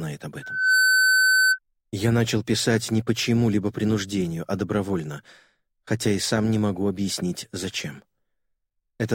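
From 0.42 s to 1.59 s a loudspeaker feedback squeal rises out of the audio: a single tone at 1.5 kHz that swells over roughly a third of a second and then holds at around 5 dB above the rest of the sound. A microphone was picking up the loudspeaker it fed, and at that frequency the loop gain passed one. The gradual swell sets it apart from a steady whistle or interference tone, which would start at full level.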